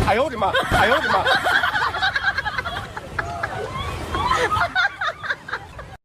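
From 0.72 s to 2.86 s the audio has a doubled audio track: a second full-band copy trails by about 0.7 s at roughly equal loudness. Unlike echo, it has no decay or room colour and starts and stops abruptly, likely from a second, slower capture path.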